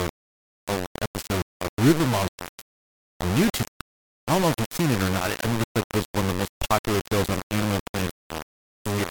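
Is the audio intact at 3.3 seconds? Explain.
No. Low bit depth without dither affects 3.3 seconds and the whole clip, most likely from rounding to only 3 bits with no dither. The error tracks the speech, giving a coarse, grainy distortion only a few decibels below it, with quieter parts sputtering between steps.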